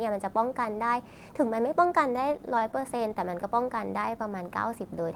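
Speech, with repeated stalls (stutter) from 2.13 to 3.45 s: sixteen brief holds, none longer than 21 ms, stretch the last sound while packets arrive late, adding about 179 ms and losing none, unlike dropouts. From 4.06 to 4.50 s a jitter buffer slow-down repeats pitch periods to rebuild reserve, running at 88% speed with about 59 ms added, while pitch stays unchanged.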